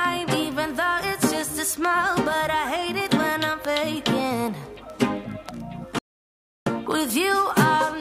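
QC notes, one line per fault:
5.99–6.67 s, playback stall: output drops to silence for about 0.68 s mid-flow, then resumes; likely the player ran short of data or its thread was blocked.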